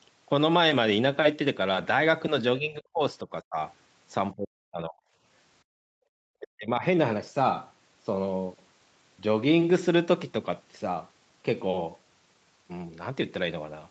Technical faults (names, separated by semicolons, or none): speech suppressed in double talk; background gated by the echo canceller